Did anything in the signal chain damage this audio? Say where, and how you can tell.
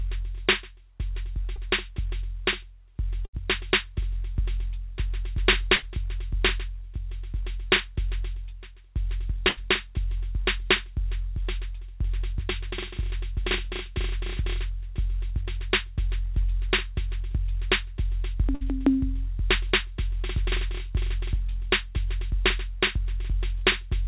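Yes, at the network stage. There is one short concealed packet loss at 1.56 to 1.59 s. The music briefly smears there. The receiver stretched the last sound for about 13 ms to cover a 20 ms hole, then blended back into the real signal.

There are four bursts of packet loss, at 3.25 to 3.35 s, 5.75 to 5.84 s, 9.48 to 9.59 s and 18.55 to 18.63 s. At each one, the last sound is held and fades. The music then picks up later, with 60 to 80 ms gone. The band-limited call path, with nothing above 4 kHz, carries these gaps through.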